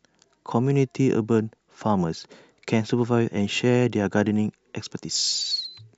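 No technical faults can be heard in the recording. The speech has no breaks or disturbances at any point.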